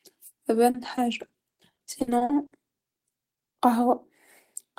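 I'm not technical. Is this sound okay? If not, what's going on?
No, from 0.70 to 2.52 s the speech turns choppy and robotic. That's repeated packet loss: dropouts up to 50 ms, each papered over by stretching the previous sound.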